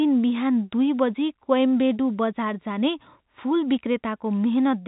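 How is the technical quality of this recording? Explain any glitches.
Nothing here counts as a glitch: the speech comes through the ordinary G.711 telephone coding, which simply leaves out everything above about 4 kHz, and no dropouts, clicks or other faults turn up anywhere in the recording.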